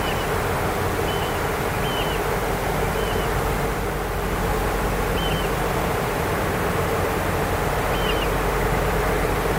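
From start to finish there's a doubled audio track: a second full-band copy trails the original by something like 150 ms, a few dB quieter, with no decay or room colour. It's likely a slower second capture path or two out-of-step copies mixed in together.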